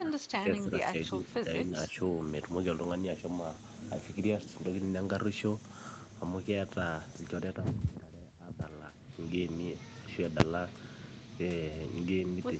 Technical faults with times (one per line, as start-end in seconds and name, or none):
0.00-1.97 speech suppressed in double talk
10.40 invalid numbers at full scale